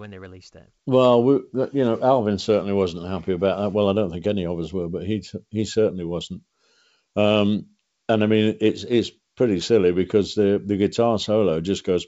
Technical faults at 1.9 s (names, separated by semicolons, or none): none